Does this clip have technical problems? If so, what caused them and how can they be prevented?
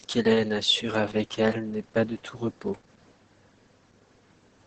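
Yes: Opus voice compression throughout leaves the speech muffled and hoarse, with a spectrogram cutoff at 8.5 kHz, consistent with SILK wideband near 10 kbps. Prevent it by encoding at a higher bitrate.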